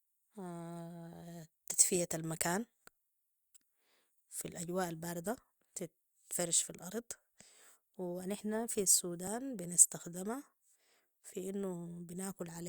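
At 9.27 s there is an overlap between stream segments. Two 6-second segments claimed the same instant, and trimming the overlap cut 6 ms of speech. It sounds like a tiny click or skip, seen as a waveform jump and a thin vertical broadband line on a spectrogram.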